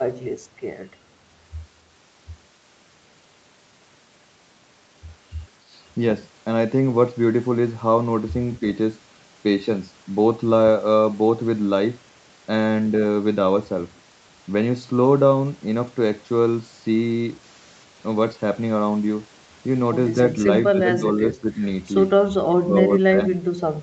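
From 20.73 to 21.61 s, 22.46 to 22.84 s and 23.07 to 23.21 s the speech dips and breaks up in pieces, by about 10 dB, then about 25 dB and 20 dB. This is likely speech suppressed in double talk, with the echo canceller mistaking overlapping talk for echo.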